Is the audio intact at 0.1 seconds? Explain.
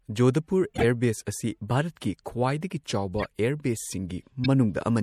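No. MP3 compression damage is plainly audible at 0.1 s and runs through the whole speech clip. The sound has the watery, swirling quality and dulled treble of a low-bitrate encoder, likely an MP3 at around 64 kbps. At that rate the encoder lacks the bits to keep every frequency band, so it trims the top end and drops quieter components, which then flicker in and out between frames, blurring consonant attacks and giving s sounds a metallic edge.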